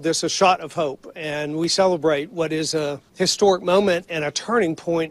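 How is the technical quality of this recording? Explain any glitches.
No technical faults are audible anywhere in this recording.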